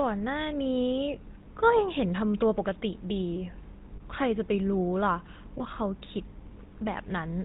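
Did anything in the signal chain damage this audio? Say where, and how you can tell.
Yes. At the codec stage, the GSM full-rate codec leaves the speech buzzy and gravelly throughout, with nothing above 4 kHz, consistent with 13 kbps GSM.

Over the network, lost GSM frames appear at 3.96–4.01 s and 5.58–5.62 s. The decoder repeated the last good frame, so each gap turns into a brief metallic ring.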